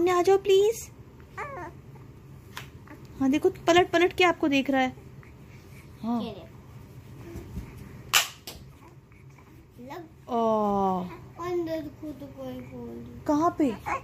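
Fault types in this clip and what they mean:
No fault types turn up in this clip, so there is nothing to list or explain.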